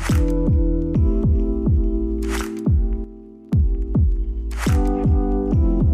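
The audio has a sudden gain jump at 3.04 s, where the level drops by about 8 dB from one sample to the next and stays down until 3.53 s, when it returns just as abruptly. The background noise falls and recovers with the sound itself, so this is a change in overall digital gain rather than a change at the source. The likely cause is a gain setting or bit shift applied without a ramp.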